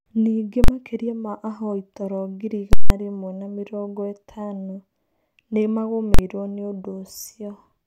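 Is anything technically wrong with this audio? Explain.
Yes. The speech is broken three times by very loud bangs, an invalid numbers at full scale fault. At 0.64 s, just before "makĩria ma ahoi toro", and again at 6.14 s, a single sharp bang lasts about 43 ms. At 2.73 to 2.90 s, between "ma ahoi toro ngiri" and "rĩmwe na mĩrongo ĩtano", a loud pop at each end brackets 170 ms of dead silence. Some calculation produced infinite or invalid values, which were pinned at maximum level for a whole processing block. The durations fit 2048-sample and 8192-sample blocks.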